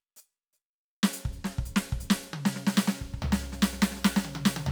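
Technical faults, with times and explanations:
2.70 to 4.71 s, sample clock jitter: from 2.7 s to the end, the music takes on a grainy hiss and roughness that sits on the sound itself, strongest on loud, bright passages and falling away as they quieten. The converter's clock is wandering, on the order of several microseconds, so each sample is taken slightly early or late. Steep, fast-changing waveforms turn that timing error into noise roughly 20 dB below the music.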